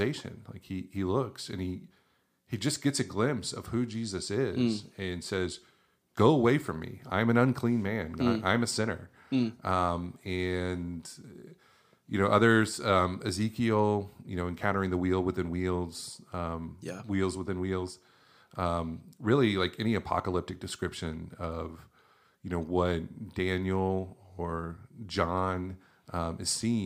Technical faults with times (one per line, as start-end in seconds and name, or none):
none